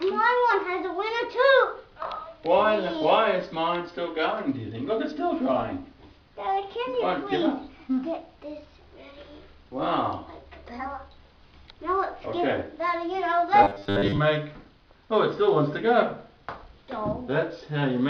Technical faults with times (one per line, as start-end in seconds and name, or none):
13.63-14.19 robotic sound from repeated short buffers